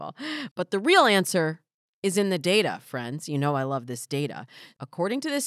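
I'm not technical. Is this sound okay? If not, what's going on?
Yes, nothing is wrong with this recording.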